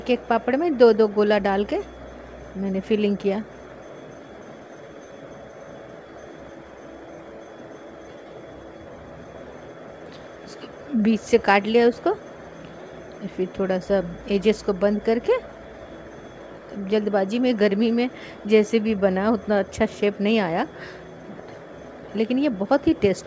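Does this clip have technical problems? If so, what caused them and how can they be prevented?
No, there are no technical problems to report here.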